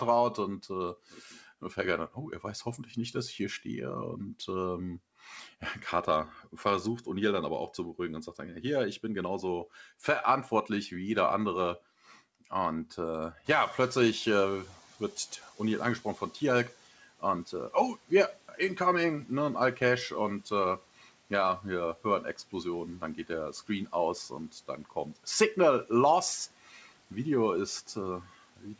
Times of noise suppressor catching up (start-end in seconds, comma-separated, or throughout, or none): 13.44-16.77